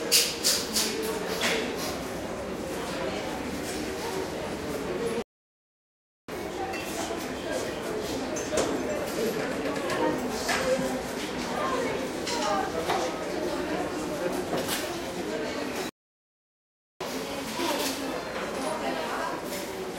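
At 5.22 s the sound cuts out for about 1.06 s, then resumes. A second playback stall, lasting about 1.11 s, starts at 15.89 s. The player likely ran short of data.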